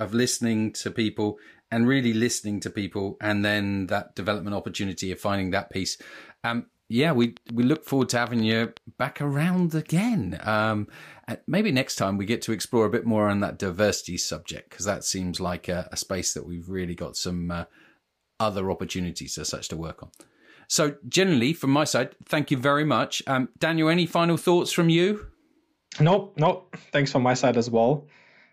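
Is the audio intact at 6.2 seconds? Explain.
Yes, the audio is intact at 6.2 seconds, with no fault at that moment.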